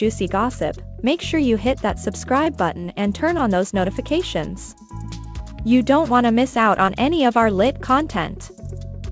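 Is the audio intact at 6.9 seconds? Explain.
No. From about 6.86 to 6.89 s there is a short concealed packet loss: roughly 20 ms of the audio never arrived at the decoder in time, and the receiver covered about 15 ms of the gap by extending the preceding sound before blending back into the real signal. It is heard as a brief smear or wobble. On a waveform the span continues the preceding sound; on a spectrogram the partials or noise stretch flat across it, all below the G.722 path's 8 kHz ceiling.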